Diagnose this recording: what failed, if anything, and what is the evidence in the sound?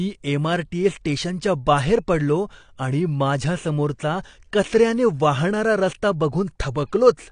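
Dull, smeared speech with fizzy, warbling sibilants throughout and nothing above 9.8 kHz points to the codec stage: likely AAC compression, consistent with AAC-LC near 32 kbps.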